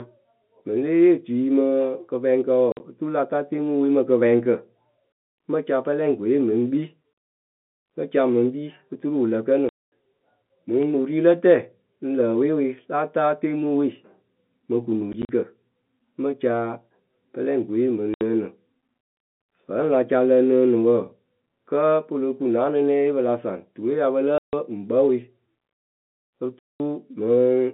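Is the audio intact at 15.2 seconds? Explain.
No. From 15.13 to 15.29 s the speech is chopped by short silent holes with hard edges, about 60 ms lost across that 160 ms span, the longest gap 40 ms. This is packet loss filled with silence: missing packets, which points to roughly 10 ms packets, were replaced by silence.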